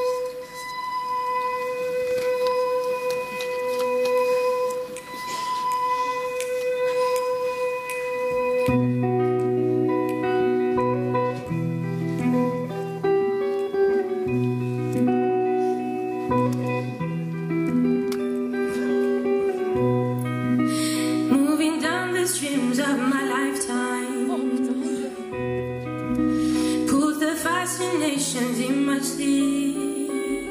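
No technical faults are audible anywhere in this audio.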